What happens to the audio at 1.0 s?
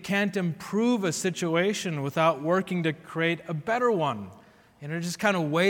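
Nothing goes wrong at 1.0 s; the audio plays through that moment intact, with no dropout, click, glitch or other fault.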